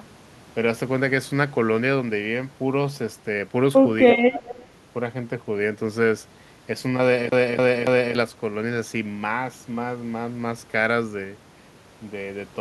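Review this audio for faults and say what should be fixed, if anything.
An echo leak shows up from 4.33 to 4.67 s: a faint delayed copy of the speech trails the original by about 250 ms, sitting roughly 20 dB below it. The likely cause is a far-end loudspeaker whose echo canceller let part of the returned signal through. On a spectrogram it appears as a weak, time-shifted duplicate of the harmonic pattern a quarter-second late; the waveform shows a low-level ghost envelope behind the main one. To prevent it, enable and tune acoustic echo cancellation at the loudspeaker end, or have that participant use a headset.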